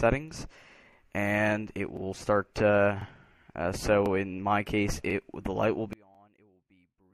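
At 0.93, 1.97, 3.02, 4.06, 5.10 and 6.15 s there are overlapping chunks: each new block begins 44 ms before the previous one finished, so that sliver plays twice. The result is a regular stutter about once a second. A dropout would leave a gap; this one repeats material.

At 2.54 s there is pre-echo. The transform block is about 36 ms long, with no switch to short blocks, so the coding noise for a sharp attack spreads back into the quiet before it. That produces a hiss about 14 dB up, lasting 15 ms, ahead of a softened onset. Unlike reverb, it comes before the attack, not after.

From 5.93 s to the end, the level collapses by about 31 dB, leaving only a faint residue. The likely cause is one channel inverted in polarity, so the shared centre content cancels when summed to mono. A plain fade or gain drop would keep the tone intact and just get quieter.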